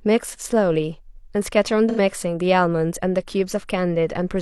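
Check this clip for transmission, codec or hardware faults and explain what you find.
One codec fault. From 1.89 to 1.99 s the speech turns smeared and noisy for about 85 ms: AAC frame loss with concealment, consistent with two lost frames that the decoder patched by reusing the last good spectrum.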